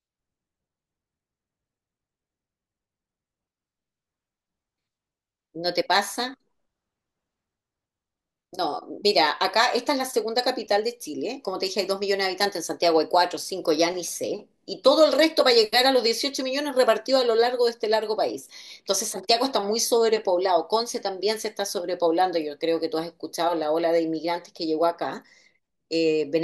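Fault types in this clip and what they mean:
No technical faults can be heard anywhere here.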